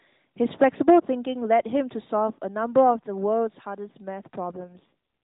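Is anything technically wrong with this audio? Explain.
Yes. An AMR rate drop from 4.56 to 4.93 s: the network throttled the mobile codec's rate, which sounds like 12.2 kbps falling to 4.75 kbps. The speech turns briefly rougher and buzzier, with the 4 kHz band unchanged.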